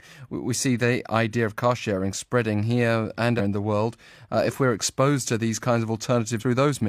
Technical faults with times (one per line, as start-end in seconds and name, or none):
3.35-3.41 damaged data in a compressed stream
6.37-6.44 damaged data in a compressed stream